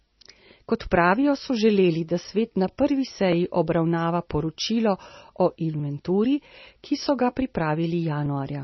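From the start, the speech carries heavy MP3 compression damage. Nothing survives above 5.9 kHz, so it sounds dull and boxed. Starved frequency lines flicker on and off, giving a watery, swirly texture and smeared consonants. This fits a very low bitrate, around 24 kbps.

From 0.86 s to 8.26 s come clock drift buffer slips. A short click repeats every 1.23 s, about seven in all. Two clocks likely disagree by roughly 500 ppm. A few dozen samples are dropped or repeated at each slip.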